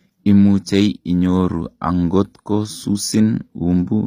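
The speech was likely passed through a low-bitrate HE-AAC encoder, plausibly the v2 variant at a rate around 24 kbps, which codes only the lower spectrum and synthesises the treble by copying lower bands upward. Throughout the clip, the reconstructed highs sound plainly artificial: harmonics fail to line up across the crossover, so sibilants come out gritty and metallic or lispy. Nothing is present above about 15.5 kHz.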